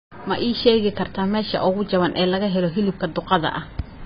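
Throughout, the speech was likely squashed by heavy AAC compression at what sounds like about 16 kbps; nothing remains above 5 kHz, leaving it dull and smeared.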